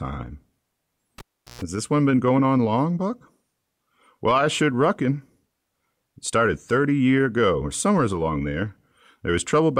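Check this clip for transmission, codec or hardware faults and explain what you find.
There is one hardware fault: a cable pulled and plugged in, from 1.18 to 1.62 s. A live connection is broken, then remade. The speech cuts with a pop and falls to near silence for about 0.38 s. As the plug goes back in, only its tip touches at first. The unshielded contact picks up a 60 Hz mains buzz lasting about 0.12 s. A second pop follows as the full connection returns and the speech resumes.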